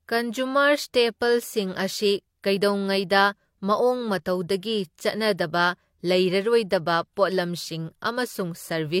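No technical faults can be heard anywhere in the speech; the signal stays continuous and steady throughout.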